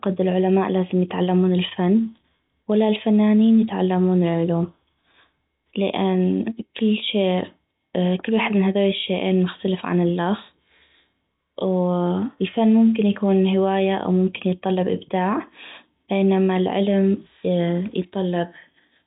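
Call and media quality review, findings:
No faults found: the speech carries the expected G.711 telephone coding, band-limited with nothing above about 3.8 kHz and only faint coding noise riding under the signal level.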